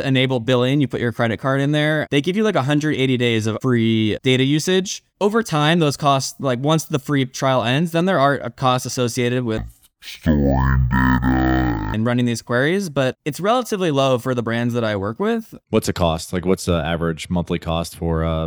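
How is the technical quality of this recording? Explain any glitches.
The recording has one clear glitch in the speech. Stereo read as mono occurs from about 9.58 to 11.94 s: the left and right samples of each frame were taken in turn as consecutive samples of a single channel, so every stretch of sound is spread over twice as many samples. The speech plays at 0.5x speed and drops 12 semitones, a full octave, sounding slow and deep, while a fainter mirrored copy shows up in the upper half of the spectrum.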